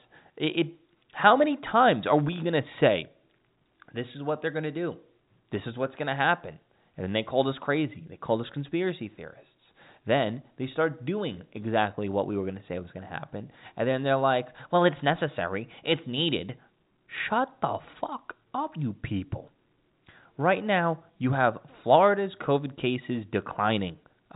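Nothing goes wrong anywhere in this speech, which simply comes down a G.711 telephone line with the band topping out around 3.8 kHz, just as a phone call should.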